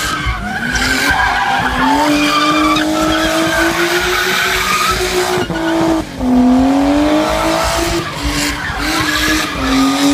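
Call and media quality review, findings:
Nothing stood out on listening to this recording.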